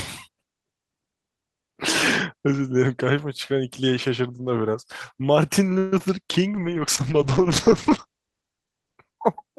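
At 5.78 s the sound stops moving forward for about 0.14 s. The last sound is stretched into a fading buzz or hiss. This is a call audio freeze, likely from delayed packets draining the jitter buffer. Nothing is lost, but the audio now runs about 137 ms late.

Short concealed packet loss follows at 5.98 to 6.01 s and again at 6.05 s. Each time, a few hundredths of a second never arrived. The gap is patched by extending the previous sound, giving a brief smear or wobble.

From 6.54 to 9.04 s a call bitrate drop takes the stream from 32 to 12 kbps. The top of the band falls from 20 kHz to 8 kHz. The speech turns muffled and rougher, and stays at its lowest for about 2.4 s.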